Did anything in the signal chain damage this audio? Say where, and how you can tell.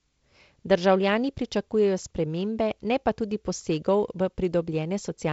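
No, nothing damaged it.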